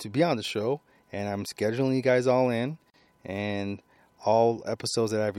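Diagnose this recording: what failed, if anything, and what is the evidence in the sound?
The failure sits at the codec stage, where separately encoded pieces were stitched together: a gap at a join of encoded pieces. Right after "you guys all in" the speech drops out from 2.90 to 2.94 s, a hole of about 38 ms with smeared edges, then picks up exactly where it left off. Nothing is missing. Each encoder pass left its start-up delay and padded last frame in place, and with pieces roughly 4 s long, only this one join lands inside the clip.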